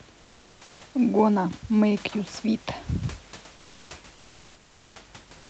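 From 5.37 s to the end at 5.50 s, the last 0.13 s of this speech clip carries comfort noise in place of the background. The real room noise, sitting about 33 dB below the loudest speech, gives way to a smooth, featureless hiss about 2 dB off in level. The likely cause is the sender's discontinuous transmission pausing and the receiver filling the gap with synthetic noise. On a spectrogram the textured floor turns into an even, uniform wash below the codec's 8 kHz ceiling, and the waveform settles into a flat band.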